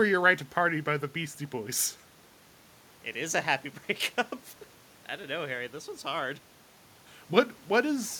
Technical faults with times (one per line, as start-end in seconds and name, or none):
none